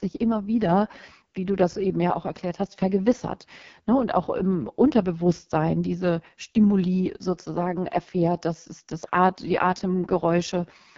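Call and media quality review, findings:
AMR wideband (HD Voice) codec running at its lowest mode throughout, consistent with about 6.6 kbit/s. Pulse-excited vocal tract model starved of bits, upper band noise-filled. Speech rough and raspy across the whole clip; nothing above 7.3 kHz.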